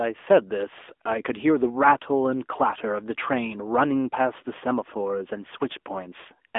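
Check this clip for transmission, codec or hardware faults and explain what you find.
The whole clip has gone through an AMR narrowband mobile codec. Throughout, nothing survives above about 3.7 kHz and the line band runs roughly 250 Hz to 3.5 kHz. The speech is squeezed into a phone-line slice and modelled from sparse pulses, so it sounds plainly buzzy and synthetic, which fits a mid-rate mode around 10.2 kbps.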